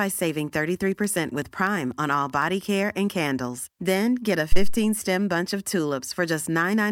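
Speech, with two separate technical faults. From 0.17 s to 2.92 s, just before "and candles", there are periodic USB or driver dropouts: about twenty small clicks spaced every 0.125 s, eight per second. Each one is a tiny gap, on the order of a tenth of a millisecond, where samples are replaced by silence. The strict regularity points to a background process stalling the USB transfer or audio driver on a fixed schedule. Later, at 4.52 s to 4.80 s, between "get a" and "bunch of", a phantom power thump appears: a low-frequency bump that dies away with a decay of about 62 ms. This is the signature of phantom or supply voltage being switched on a live input, with the DC step passing through the coupling capacitors into the signal path.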